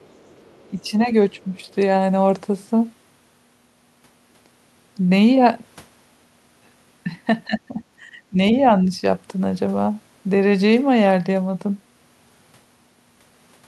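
From 0 to 0.67 s, and again from 1.38 to 1.73 s, a second voice can be heard faintly under the speech, some 35 dB down. This is the other side's voice leaking through, likely loudspeaker echo that the canceller left in the microphone signal. On a spectrogram it shows as weak, separate harmonic traces beneath the main speech.

Between 0.68 and 1.1 s and between 1.31 and 1.58 s, the speech dips by about 10 dB. At 7.46–7.82 s and 8.02–8.38 s it dips by about 15 dB. This is speech suppressed in double talk. Both sides likely talked at once, and the canceller turned the near talker down along with the echo. The waveform envelope shows sudden notches, and the spectrogram dims across the band.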